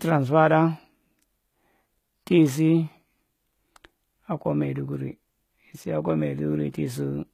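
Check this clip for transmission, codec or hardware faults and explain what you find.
One fault is present, running through the whole speech clip: the treble is bright but synthetic, with s sounds turning gritty and lispy. This is likely HE-AAC compression at a low rate, around 20 kbps by the sound. Spectral band replication copies lower bands upward under a coarse envelope, so the upper harmonics never line up with the real ones. Plain low-bitrate coding would instead dull or cut the treble; here the treble stays bright but metallic and mismatched.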